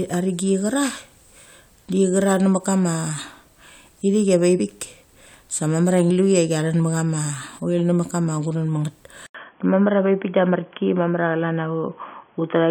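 At 4.59 s and again at 6.1 s, compressed frames were skipped: the decoder dropped about three of its 23.2 ms frames each time, losing roughly 70 ms of speech. Because adjacent frames overlap, each jump sounds like a brief smeared blip, not a sharp click.

From 9.26 s the input was likely switched to a poorer device. An 80 ms silence marks the change, and after it nothing above 3.4 kHz gets through, so the speech turns dull and boxy. The level stays about the same, with a faint new noise floor underneath.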